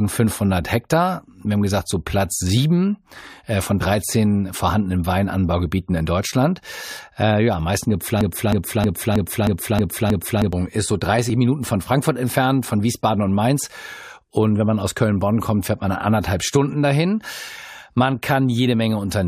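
From 8.21 to 10.53 s the speech turns into a broken-record loop: a 0.32 s fragment repeats exactly, back to back, seven times, and the speech that belonged in that span is lost. The likely cause is a stalled player or stream resending its last buffered fragment.

At 11.30 s an overlap between stream segments cuts a few milliseconds out of the speech. The waveform jumps across the gap, producing a brief click or tiny skip, consistent with mismatched time stamps at a segment boundary in a stream using 6-second segments.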